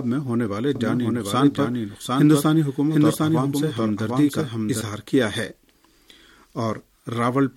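From 0.75 s to 4.81 s a doubled audio track appears: a second full-band copy trails about 0.7 s behind at roughly equal loudness, likely from a slower capture path. Unlike an echo, it carries no decay or room colour and cuts in and out abruptly.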